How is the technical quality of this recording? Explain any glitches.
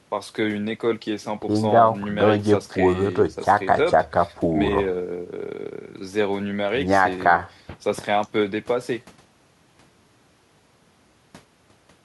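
The technical quality of the recording holds up, with no glitches to explain.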